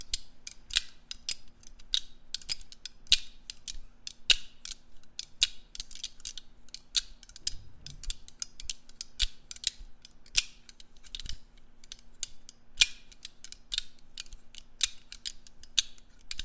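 No faults are audible anywhere in these sounds.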